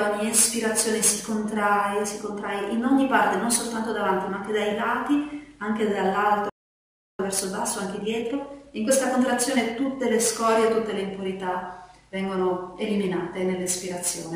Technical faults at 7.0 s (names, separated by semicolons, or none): playback stall